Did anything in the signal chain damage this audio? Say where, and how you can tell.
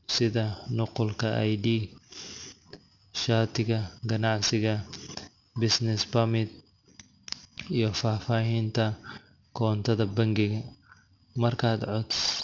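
Yes. Throughout the clip the sibilants sound gritty and metallic, with harsh tones that don't follow the speech's natural pitch. The spectrum runs hard up to a sharp edge near 6 kHz and has strong content just beneath it, roughly 10 dB below the speech. That is aliasing at the sample-rate conversion stage. The pattern fits a drop from 44.1 kHz to 12 kHz with no low-pass filter first, so everything above 6 kHz folded back down as false, unrelated frequencies.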